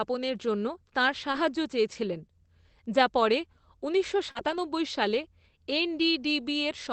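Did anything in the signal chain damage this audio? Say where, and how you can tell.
Yes. The damage happened in the network stage of a call, at two points.

Lost packet rebuilt from error correction. After "জন্য তাঁর", from 1.27 to 1.37 s, the sound turns rougher and noisier for about 60 ms, with no gap. The same roughness returns from 4.35 to 4.57 s, after "যা পরে ঊনিশশো", this time for about 120 ms. Packets went missing here. The decoder played the low-bitrate backup copies carried in the following packets. The lengths fit three lost 20 ms frames at the first point and six at the second.

Short concealed packet loss. Also after "যা পরে ঊনিশশো", at 4.31 to 4.37 s, there is a brief smear just before that second rough stretch. About 40 ms of audio never arrived in time. The receiver filled roughly 35 ms of it by extending the last sound, then blended back toward real audio. Because the rebuilt stretch follows at once, the smear runs straight into the rough section.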